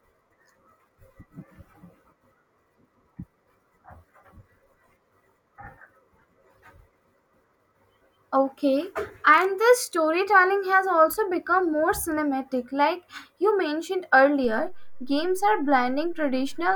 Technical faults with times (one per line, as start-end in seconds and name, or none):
14.44-16.75 DC step